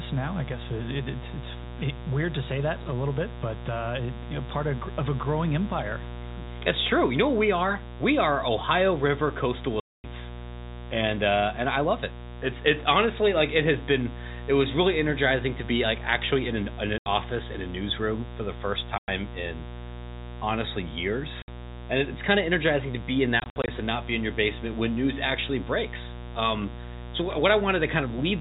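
Mains buzz runs through the entire clip at 60 Hz. Sharp switching spikes from a dimmer, rectifier or unshielded run enter twice per mains cycle, so the hum becomes a dense stack of 60 Hz harmonics that climbs into the kilohertz range. It sits very high, about 10 dB under the speech, and is heard as a constant raspy buzz under every phrase. Its upper harmonics stop at the 4 kHz edge of the telephone band.

Packet loss filled with silence appears at five points. From 9.8 to 10.04 s, a 240 ms hole cuts the speech. At 16.98 s, 80 ms drops out between "actually in an in" and "in a newsroom". At 18.98 s the gap is 100 ms. At 21.42 s, 60 ms vanishes just before "and it's kind of". From 23.4 to 23.68 s, between "energizing to be in" and "and not be in", 140 ms of short dropouts are scattered over 280 ms, none longer than 60 ms. Each gap is a whole multiple of 20 ms, which fits 20 ms packets. The receiver played silence in place of the missing data, so the speech switches off and on with hard edges.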